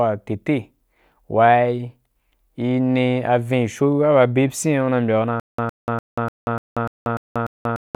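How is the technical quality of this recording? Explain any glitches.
The recording breaks down near the end with a stutter with silent gaps. From 5.40 s to the end of the clip, the same 109 ms fragment of speech repeats 8 times, each followed by about 186 ms of digital silence, a steady cycle of roughly 295 ms. This likely comes from a stalled player or stream that replays its last fragment on each retry and then runs dry, so the speech that should have followed is lost. On a waveform it shows as identical short blocks separated by flat silent gaps. On a spectrogram it appears as matching vertical stripes alternating with completely empty columns.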